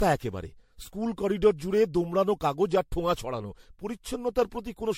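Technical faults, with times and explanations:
Throughout, generation loss: the speech sounds swirly, hollow and smeared, with blurred consonant onsets and nothing above 16.7 kHz. This is worse than one MP3 pass near 64 kbit/s would leave, likely from around seven re-encodes whose offset frame grids compound the artefacts.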